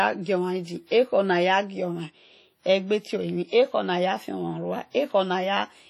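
Heavy WMA compression runs throughout the speech, likely from a low-rate encode near 32 kbps, whose long transform blocks smear quantisation noise into a ringing, washy hiss that breathes with the sound.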